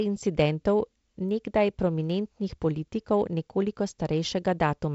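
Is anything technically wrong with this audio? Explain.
Yes. From 0.48 to 4.52 s there are word clock ticks: the receiving device isn't locked to the sender's clock, off by around 30 ppm, so one sample slips roughly every 0.7 s, heard as about seven sharp, uneven ticks in the speech.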